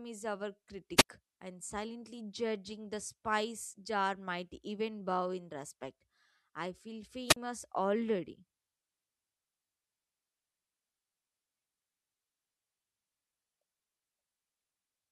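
At 0.96 to 1.08 s, after "is our", and again at 7.27 to 7.36 s, after "in respect I feel", a wireless microphone squelch dropout occurs. The fading radio signal lets hiss swell briefly before the receiver's squelch cuts the output, leaving holes of about 74 ms and 38 ms. That rising static distinguishes it from a clean digital dropout.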